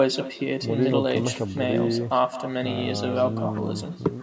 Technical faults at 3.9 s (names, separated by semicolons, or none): echo with no canceller